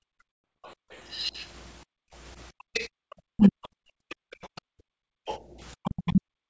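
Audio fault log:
0.00–0.91 s, 1.85–3.02 s, 3.89–5.55 s: background gated by the echo canceller. The room sound drops out during each stretch, by about 36, 35 and 39 dB at its deepest. The canceller clamps the microphone while the far side plays and then releases it.
0.32–0.44 s: packet loss on an ADPCM call. A hard-edged 120 ms hole, which fits roughly ten lost packets. Afterwards the audio returns with brief distortion, because the decoder's predictor and step size must resynchronise with the sender's.
0.65–1.46 s, 2.73–4.61 s, 5.26–5.39 s: other side's voice leaking through. A faint second voice sits some 25 dB under the main talker, likely loudspeaker echo that the canceller left in the microphone signal.
3.30–3.61 s, 5.83–6.34 s: speech suppressed in double talk. The talker's speech is turned down by up to around 40 dB, likely because the canceller mistook overlapping talk for echo and attenuated both sides.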